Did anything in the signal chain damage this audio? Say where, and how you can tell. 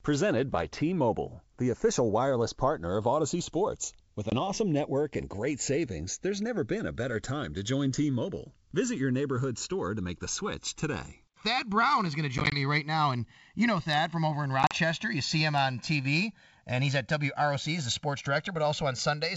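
Yes. The fault arises at the capture or playback converter stage. The two channels are running on separate clocks, and the mismatch is on the order of 70 ppm. Because of this, the delay between them creeps steadily across the clip and reaches roughly 1.5 ms by the end. Summed to mono, this produces comb notches that sweep slowly through the spectrum, heard as a gradual flanging. That slow, one-directional sweep identifies channels drifting apart. A fixed wiring or alignment delay would produce static notches instead.

The second fault is packet loss on an ADPCM call, in the network stage. It shows up as hard-edged silent holes at 4.30–4.33 s (20 ms lost), across 12.38–12.57 s (60 ms lost in short runs of up to 20 ms, scattered over 140 ms) and across 14.63–14.75 s (50 ms lost over 80 ms, longest run 40 ms). After each gap the sound comes back slightly distorted. This happens because the decoder's predictor and step size have lost step with the sender's, and they take some tens of milliseconds to resync. 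That recovery smear distinguishes these gaps from a clean dropout or a concealed loss. The G.722 wideband coding itself keeps its full 7 kHz band with at most a faint upper-band hiss.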